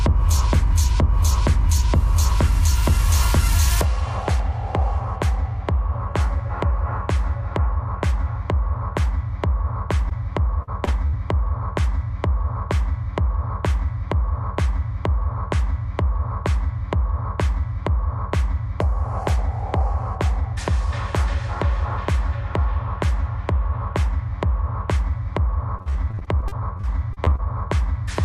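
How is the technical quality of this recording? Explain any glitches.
The recording has network-style dropouts: a cluster of four packet-loss glitches between 10.09 and 11.15 s, and a longer stretch of repeated loss from 25.79 to 27.47 s.

Short concealed packet loss occurs twice, at 10.09–10.13 s and 10.85–10.89 s. Each time about 20 ms of audio failed to arrive in time. The receiver bridged the hole by extending the preceding sound for roughly 12 to 17 ms, then crossfaded back into the real signal. The result is a tiny smear or wobble rather than an audible gap. Its brevity separates it from the bursts around it.

A burst of packet loss appears at 10.63–10.69 s and 11.07–11.15 s, with about 40 ms and 60 ms of audio lost. Here the concealment had to run longer, about 46 and 56 ms, and it faded as it went. You hear a held buzz or fading hiss, then the sound picks up further along with a piece skipped. 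Unlike the short losses, these leave a jump in continuity.

Repeated packet loss (robotic sound) runs from 25.79 to 27.47 s. Fourteen separate gaps, none longer than 43 ms, drop about 340 ms of audio in total, and concealment fills roughly a fifth of the stretch. Because each patch is quickly followed by another, the sound turns choppy over the whole span. Isolated events have a clean recovery between them, and this stretch does not.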